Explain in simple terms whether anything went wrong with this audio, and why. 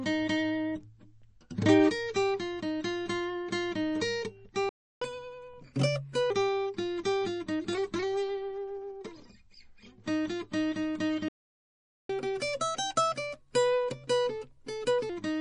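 A few things went wrong with this music clip. Throughout, it sounds watery and a bit swirly. That's MP3 compression, likely at a low bitrate, where the encoder drops the treble and quieter detail to save space.

There are two playback stalls, likely from the player running out of data. The music simply stops from 4.69 to 5.02 s, about a third of a second, and again from 11.28 to 12.10 s, about eight tenths of a second.

After each stall comes catch-up at higher speed. The player rushes through what it missed at 1.25 times normal speed, so the music plays faster and around four semitones higher, from 5.02 to 6.30 s and from 12.10 to 15.10 s, then settles back.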